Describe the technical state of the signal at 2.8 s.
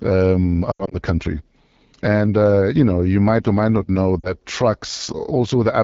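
At 2.8 s the speech sounds rough and raspy, with a gritty, buzzy edge, and this roughness runs through the whole clip. It is AMR wideband (HD Voice) codec damage. The codec models speech below 6.4 kHz as pulses driving a vocal tract filter and fills the 6.4 to 7 kHz band with shaped noise. The plainly audible coarseness fits one of its lowest modes, about 8.85 kbit/s.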